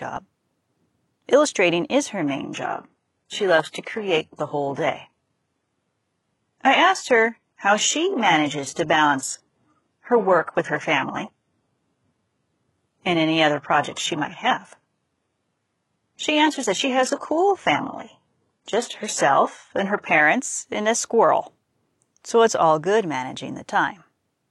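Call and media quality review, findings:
Adaptive stream at a lower bitrate, 2.21 to 20.21 s, from after "is her" to "and a squirrel". Speech abruptly dull, nothing above 11.5 kHz, heavier codec artefacts. No gap at either switch. Player fell back to a low-rate rendition, consistent with roughly 12 kbit/s HE-AAC.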